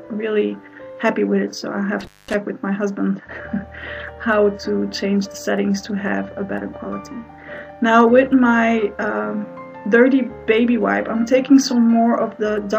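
An intermittent contact fault interrupts the audio from 2.00 to 2.35 s, with the signal path open for about 213 ms of that span. A loose cable or plug briefly loses its connection, so the sound drops out and breaks up rather than fading. Crackle marks the edges where the contact opens and closes again, and hiss remains during the open stretch, since only noise passes while the signal is cut.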